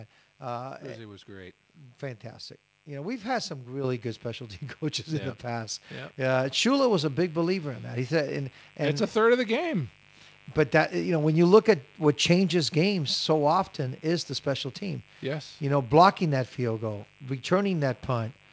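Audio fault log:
Throughout: mains buzz. A steady, raspy buzz sits under the speech at roughly 30 dB below it. Sharp switching spikes arrive twice per cycle of the 50 Hz supply, so the buzz is rich in harmonics rather than a pure hum. On a spectrogram it appears as evenly spaced horizontal lines at multiples of 50 Hz, climbing into the kilohertz range and stopping at the 8 kHz ceiling of the call band. On a zoomed waveform it shows as a repeating spiky pattern every 10 ms, even in pauses.
3.84 s and 6.45 s: microphone volume stepped up. Both the speech and the buzz underneath jump up together in a single step, because the capture level was raised at the input rather than anything changing in the room. The first step, between "know we've had some" and "good specialty", adds about 7 dB. The second adds about 3 dB. On the waveform the envelope widens abruptly at each point. On a spectrogram every band, including the buzz lines, brightens at the same instant.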